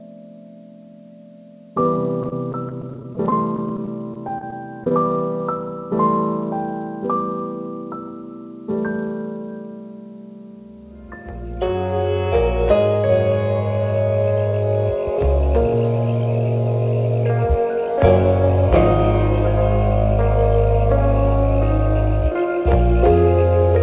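From 2.23 to 4.91 s the call suffers repeated packet loss, producing a robotic sound. Packets go missing or arrive too late again and again, and each hole is bridged by stretching the last received sound forward, the longest about 26 ms. Roughly 12% of that stretch ends up as patched-in filler, so the audio turns choppy and mechanical, with small pieces dropped out. All of it sits within the narrow call band, which has nothing above 4 kHz.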